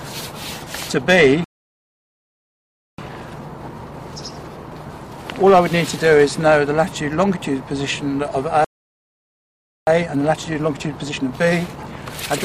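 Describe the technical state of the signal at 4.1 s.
Time-compressed catch-up runs from 2.98 to 5.98 s, which includes 4.1 s. After a stall, the player works off its backlog by cutting out small pieces and cross-fading the joins, so the audio moves about 1.1 times faster at unchanged pitch, sounding hurried.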